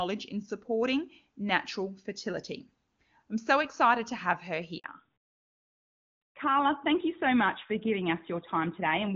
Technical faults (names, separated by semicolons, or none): handover gap; fallback to narrowband